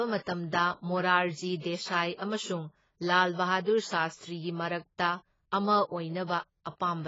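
Throughout the speech, the likely cause is heavy AAC compression at a very low bitrate, consistent with about 16 kbps AAC-LC. The encoder discards everything above 7.6 kHz and coarsely quantises what remains, so the audio sounds dull, band-limited and smeared.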